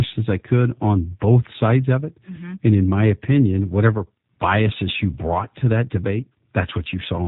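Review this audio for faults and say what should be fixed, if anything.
The speech carries G.729 codec damage from start to finish. It is plainly audible. The codec rebuilds each 10 ms frame from a vocal tract filter, a pitch predictor and a few coded pulses. The result sounds rough and slightly synthetic. Nothing above 4 kHz survives, so the top end is missing. The narrow band and coarse texture fit an 8 kbit/s G.729A stream. To prevent it, record or transmit with a wideband codec at a higher bitrate.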